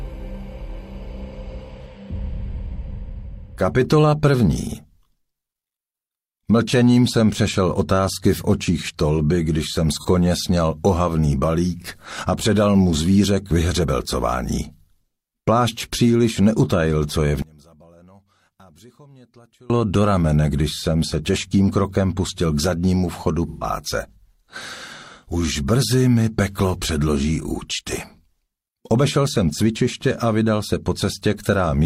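This audio has AAC frame loss with concealment at 9.93 to 10.05 s, a brief smeared patch that fits one lost frame of about 43 ms, and at 23.49 to 23.64 s, a longer 128 ms noisy smear that fits three frames; on a spectrogram both show blurred, flattened spectral columns. From 17.42 to 19.70 s the summed sound drops by about 30 dB to a thin residue, likely from one channel inverted cancelling shared content, and the waveform shrinks sharply there.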